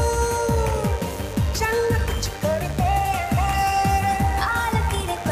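Switching spikes from something like a dimmer, a rectifier or a break in cable shielding have got into the signal path, pulsing twice in each cycle of a 50 Hz mains supply. That lays a mains buzz under the audio for its whole length: a steady, raspy tone built on 50 Hz harmonics stretching up into the low kilohertz. The buzz sits only roughly 15 dB below the wanted sound, so it is plainly audible throughout.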